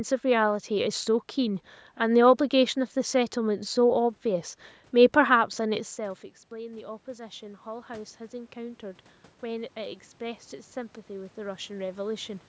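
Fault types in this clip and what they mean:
Automatic gain rising: after the input drops by about 17 dB, gain climbs about 6 dB over roughly 3 s, lifting voice and background together, unlike a talker simply moving.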